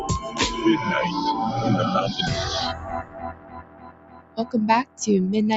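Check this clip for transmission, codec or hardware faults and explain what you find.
A speech-oriented noise suppressor left active on non-speech audio is the fault here; the call path's roughly 8 kHz bandwidth ceiling is expected.

Noise suppressor applied to music or sounds, throughout: the suppressor treats steady content and ambience as noise and keeps adjusting its gain, with level swings of around 20 dB. Onsets get through while sustained parts and tails are pulled down, so the sound pumps and thins.

Sound cut by the noise suppressor, from 2.74 to 4.38 s and from 4.85 to 5.0 s: here the suppressor judged the sound itself to be noise, cutting it by up to about 14 dB and about 13 dB respectively. Held and decaying parts sink and end early.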